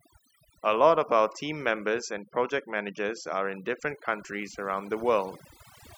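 The background collapses into near silence dotted with twinkling specks from start to finish of this speech clip. That's overdone noise removal, where the reduction is set so strong that bands near the noise estimate are switched off along with quiet speech detail.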